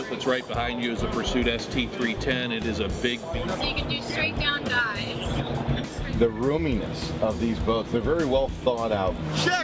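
Nothing goes wrong anywhere in this one: no dropouts, glitches or other technical faults turn up at any point in the audio.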